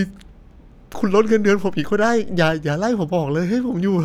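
At 0.94 s the waveform's zero line jumps to a new offset and holds there until 2.52 s, when it steps back: a DC step. Each jump is heard as a low thump, one at 0.94 s and one at 2.52 s, while the speech carries on unchanged between them.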